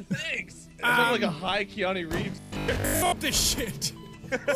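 From 2.32 to 3.14 s the sound turns robotic: a rigid 50 Hz buzz follows the original only roughly, likely because short buffers, fitting about 20 ms each, repeat while most of the real audio is skipped. The waveform shows identical repeating blocks; the spectrogram shows evenly spaced 50 Hz harmonics.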